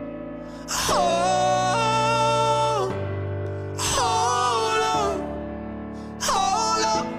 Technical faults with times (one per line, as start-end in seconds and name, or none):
1.09 compressed frames skipped
6.83 compressed frames skipped